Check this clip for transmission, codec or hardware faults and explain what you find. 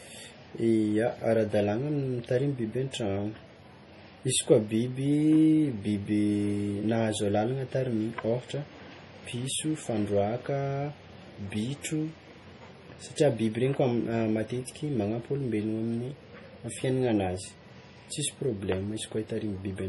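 The speech has clear MP3 compression damage running the whole way through. Nothing above 11.4 kHz survives, and the damage is heavy: watery, swirly sibilants and smeared consonant attacks, likely from an encoder starved of bits, which fits roughly 32 kbps. Weak frequency lines flicker in and out between frames.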